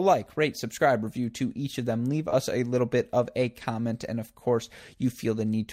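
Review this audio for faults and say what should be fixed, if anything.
At 2.29 to 2.34 s there is short concealed packet loss. About 20 ms of speech never arrived in time, so the receiver extended the preceding sound for 22 ms and blended back, leaving a brief smear rather than a plain dropout's hard silence. A larger jitter buffer or forward error correction would prevent it.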